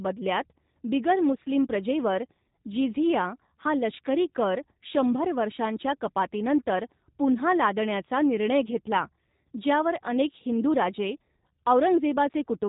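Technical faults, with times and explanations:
Throughout, G.729 codec: speech is resynthesised from a pitch predictor, vocal tract filter and sparse pulses, so it sounds plainly rough and synthetic, capped near 4 kHz, fitting an 8 kbit/s coder.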